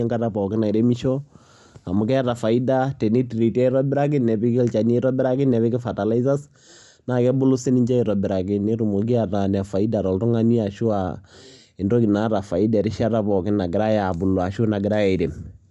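Bluetooth LC3 compression runs through the whole speech clip, from the first second to the last. The upper spectrum sounds thinned and partly replaced by noise, giving the speech a breathy, grainy edge that is plainly audible throughout. The likely cause is a low-rate transform codec discarding high-frequency detail and filling the gaps with synthetic noise. The character fits LC3 at around 48 kbps with 10 ms frames, as used in Bluetooth LE Audio.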